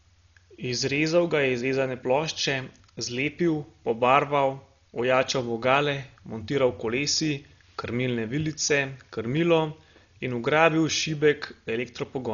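Throughout, the speech sounds dull, with nothing above 7 kHz and rough, fluttering noise around tones, likely Dolby Digital compression at a low bitrate around 40 kbps; unlike a plain low-pass, dither fills the lines left without bits.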